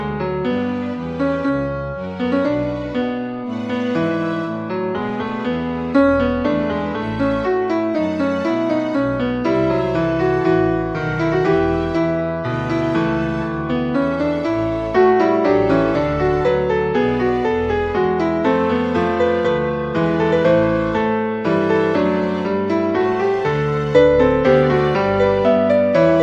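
Nothing stood out on listening to this audio.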